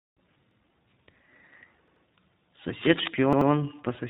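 Speech that sounds muffled, a little rough and synthetic throughout, with nothing above 3.8 kHz: iLBC codec damage, plainly audible, where each 20 ms frame is coded on its own at a rate that fits iLBC's 15.2 kbps mode. Short stutters occur at 0.51 to 0.60 s, 1.88 to 2.05 s and 3.33 to 3.50 s, where an 85 ms piece of sound plays again with a hard join: once more at the first point, twice more at the other two. This is a repeated buffer, the device replaying its last block when new audio arrived late, which fits a 4096-sample buffer. From 2.79 to 3.08 s, dense, uneven scratching sits only slightly below the speech. This cable scratch noise is likely from a worn cable, connector or control being moved while its contact resistance fluctuated.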